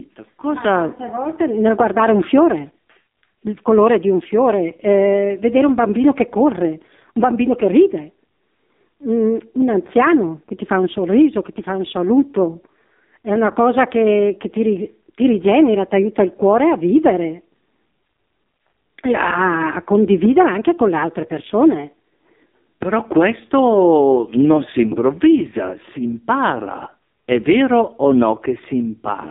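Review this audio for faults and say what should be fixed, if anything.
The whole clip carries AMR narrowband mobile codec damage. The speech is confined to roughly 150 Hz to 3.7 kHz, which points to a telephone path. The heavy buzzy, synthetic quality fits AMR-NB at a low rate such as 5.9 kbps, where a vocal-tract model driven by sparse pulses stands in for the real waveform. On a spectrogram, energy stops dead at 3.7 kHz, with smeared, blotchy harmonics and a thin bottom below 150 Hz. To prevent it, record or route the audio over a wideband or uncompressed path, not a narrowband mobile call.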